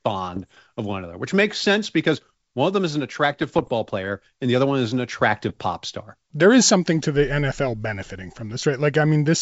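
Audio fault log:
0.32–0.66 s, 3.41–3.70 s and 5.49–5.59 s: bit errors on an ADPCM link, before "of one another which", "player and the other" and "pop star". Corrupted bits knock the G.722 decoder's step size and predictor off track. Each burst rings on as rough pops and brief level jumps.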